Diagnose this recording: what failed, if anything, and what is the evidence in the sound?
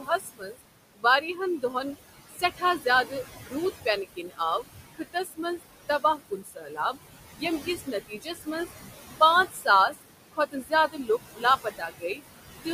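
Call processing is the culprit, with noise suppressor artifacts throughout. The suppressor pulls the background down about 18 dB between phrases, then lets it rise back under the speech, so the leftover noise pumps. The room noise itself sits about 11 dB below speech.

The same stage also causes speech cut by the noise suppressor. It mistakes parts of the talker for noise at 0.0–0.62, 0.95–1.75, 2.29–3.13, 3.85–4.64, 4.95–6.97, 7.36–8.72 and 9.2–12.21 s. Quiet endings and consonants get ducked by up to about 21 dB and sound swallowed.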